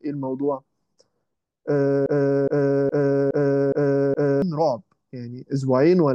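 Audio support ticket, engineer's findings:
Playback chain likely stalled, resending its last held fragment. Broken-record loop, 2.06–4.42 s: 0.42 s speech fragment repeats exactly six times; original audio lost.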